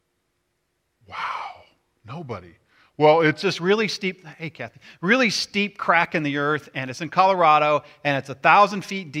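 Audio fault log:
0.00–3.42 s, section at the wrong speed: the opening speech plays at 0.864 times normal speed, so it is slower and around three semitones lower, then returns to normal pace and pitch. Unlike a pitch shift, timing and pitch drop together, likely from playback against a mismatched clock.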